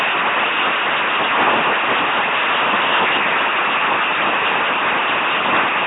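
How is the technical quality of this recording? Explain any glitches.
Quality's poor the whole way through: the speech has been squeezed through an LPC-10 vocoder, and the damage is heavy from start to finish.

Rather than keeping the actual waveform, the codec models each short slice as a simple vocal-tract filter fed by either a buzzy pulse train or plain noise, never a blend. So the speech comes out as a mechanical, droning robot voice, with stray buzz or hiss wherever that voiced-or-unvoiced call goes wrong. Nothing survives above 3.8 kHz, and the overall character fits a 2.4 kbit/s stream.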